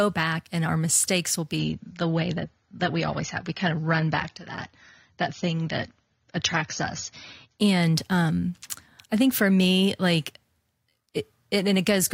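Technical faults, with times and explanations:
1.59 to 7.59 s, adaptive stream at a lower bitrate: for about six seconds the speech suddenly picks up that swirly codec-artefact edge, then snaps back to full clarity with no gap either side. That's the player dropping to a cheaper version of the stream when the connection sagged. The sound points to a fall from roughly 96 kbit/s AAC to something near 24 kbit/s, where the encoder sacrifices the highs first.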